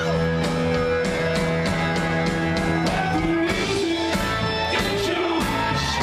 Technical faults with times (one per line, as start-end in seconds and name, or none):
none